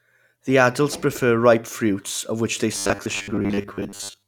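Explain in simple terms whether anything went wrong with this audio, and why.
From 2.73 s to the end, the speech becomes a metallic 100 Hz buzz: robotic sound from repeated short buffers, likely late audio patched by repeating 10 ms snippets.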